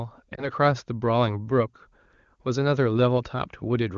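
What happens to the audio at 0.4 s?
At 0.35 to 0.49 s a lost AMR speech frame is concealed: the decoder repeats the previous pitch and vocal-tract settings at reduced gain, giving a brief warbly dip. The waveform shows a short amplitude sag; the spectrogram shows smeared, flattened harmonics.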